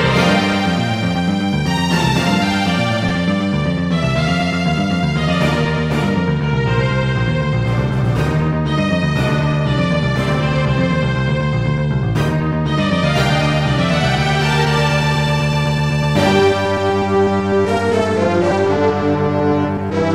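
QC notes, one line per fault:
3.09 s and 18.51 s, lost LE Audio frames. Two brief gaps in the Bluetooth LE Audio stream, about 15 ms and 7.5 ms long, which fits two frames and then one frame of 7.5 ms. The LC3 decoder covers each gap by repeating the last spectrum with random signs. That replaces the real waveform with a short noisy smear. Both losses are too brief for the fade toward silence to take hold. The light codec softening underneath is part of the normal stream.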